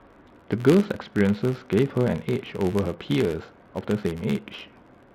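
Throughout the speech, a buzz that rises and falls with the speech level sits at about 86.1 Hz. It comes from a filter restarted on every block. The filter drops its memory and starts each block from silence, leaving a small tick each time. The rate fits a 512-sample buffer.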